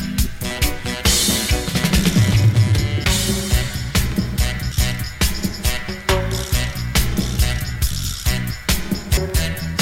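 Damaged data in a compressed stream shows up at 3.04 s, 4.72 s and 9.17 s, each as a brief chirp or blip breaking into the sound. At each point some bytes of the encoded stream are wrong, so the decoder cannot read the frames there correctly. It loses its place in the bitstream and scans forward for the next valid frame header before decoding resumes. The garbled output in that gap is the short, harsh burst.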